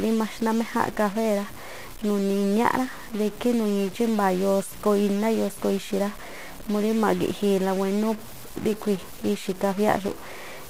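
A speech recording carries harsh, buzzy distortion from start to finish. It sounds like a stuck bit, with one data bit likely held at a fixed value by a broken line or converter. Roughly half the samples land off by that bit's weight. The pattern follows the waveform, so the grit rides on the speech itself. Pauses do not fall silent. They fill with noise, since the error step sits at about -35 dBFS.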